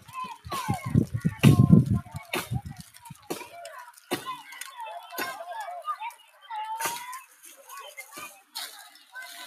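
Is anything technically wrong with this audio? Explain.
Yes. Throughout the clip the level keeps pumping and fluttering: sustained parts and decaying tails sink while sharp onsets punch through, so the sound feels thin and unsteady, with the level swinging by something like 10 dB. This is a noise suppressor applied to music or sounds. A processor built for speech is treating steady, tonal or reverberant material as background noise and pulling it down, which leaves only the transients at full strength.

The clearest cases of sound cut by the noise suppressor come at 2.05 to 2.32 s (about 7 dB deep), 2.77 to 3.29 s (about 11 dB), 3.89 to 4.11 s (about 10 dB), 6.13 to 6.48 s (about 11 dB), 7.24 to 7.7 s (about 10 dB), 7.97 to 8.14 s (about 5 dB), 8.31 to 8.55 s (about 13 dB) and 8.84 to 9.15 s (about 10 dB). In each, held or fading sound sinks for a fraction of a second, or its decay is cut short.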